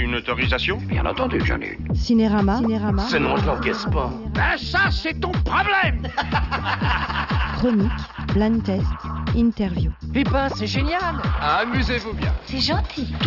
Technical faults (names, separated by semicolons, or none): none